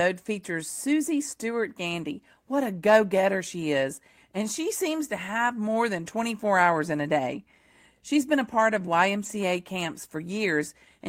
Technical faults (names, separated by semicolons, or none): lost packet rebuilt from error correction